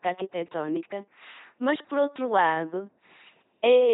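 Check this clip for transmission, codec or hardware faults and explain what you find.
One codec fault runs through the whole clip. Speech passed through an LPC-10 vocoder, fitting 2.4 kbit/s. A ten-pole filter fed only pulses or noise produces heavily buzzing, robotic speech with nothing above 3.8 kHz.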